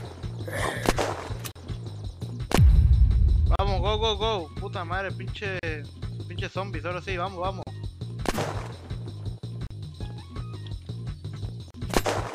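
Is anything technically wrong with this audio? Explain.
Yes. There is a gap at a join of encoded pieces at 1.52, 3.56, 5.59, 7.63, 9.67 and 11.71 s, recurring every 2 s. Separately encoded pieces were joined with their start delay and end padding kept, leaving abrupt gaps of about 38 ms with smeared edges, so the silent part is shorter, before the sound resumes where it stopped.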